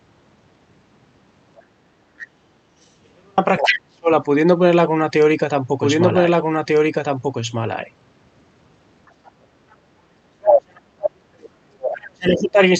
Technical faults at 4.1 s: speech suppressed in double talk

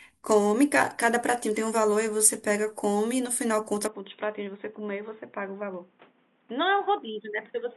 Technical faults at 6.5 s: input switched to a poorer device

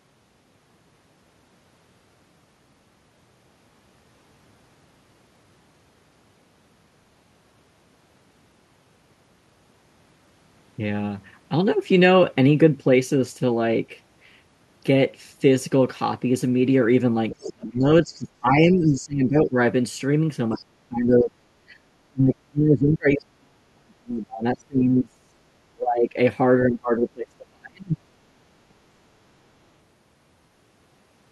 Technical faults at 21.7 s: background gated by the echo canceller

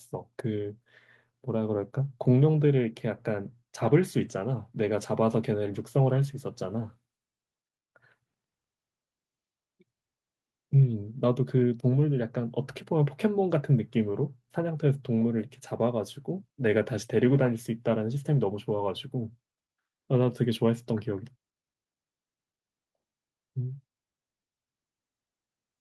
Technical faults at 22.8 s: none

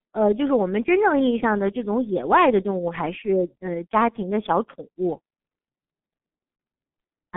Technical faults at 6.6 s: G.723.1 codec; VoIP packet loss concealed by the speech codec

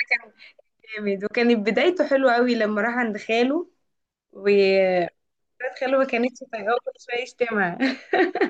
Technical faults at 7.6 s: none

